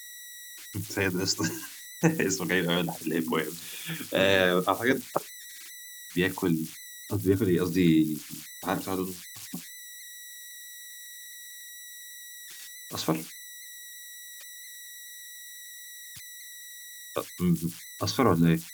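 An undithered delta-sigma converter locks into repeating bit patterns throughout, producing converter idle tones: a whistle around 2 kHz, about 17 dB under the speech.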